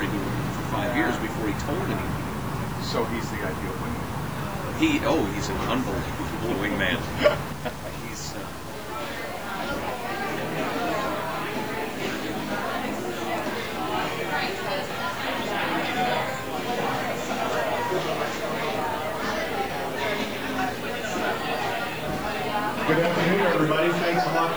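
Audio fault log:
Throughout: low bit depth without dither. The sound carries a grainy, gritty distortion that shifts with the signal itself, roughest on quiet passages, where the faintest parts sputter between steps or drop out to silence. The grain sits roughly 20 dB below the signal, which fits a 6-bit, truncated signal, likely the cause. Unlike steady hiss from noise or dithered quantisation, this error follows the sound and vanishes when it does.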